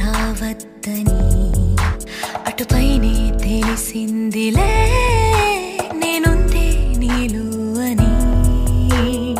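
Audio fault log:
7.08 s, damaged data in a compressed stream: a brief glitch, under 20 ms, where corrupted bytes made the decoder misread a frame and lose sync until it found the next frame header.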